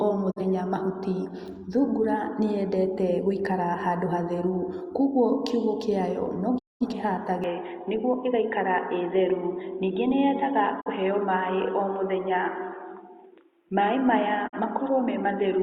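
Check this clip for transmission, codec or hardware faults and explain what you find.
Two kinds of fault are present: repeated digital broadcast dropouts and a mid-clip change of input.

Digital broadcast dropouts occur at 0.3, 6.57, 10.80 and 14.47 s. The receiver mutes when frames are lost or fail checks. The speech fades out over about 20 ms, leaving short holes of roughly 0.1 s, or about 0.3 s at 6.57 s. That pattern fits one or several lost frames of about 43 ms each.

From 7.44 s to the end, the speech abruptly turns dull, with nothing above 3.8 kHz and a faint new noise floor, about 45 dB down. There is no gap and no obvious level jump at the change. The likely cause is the input switching to a poorer, band-limited device.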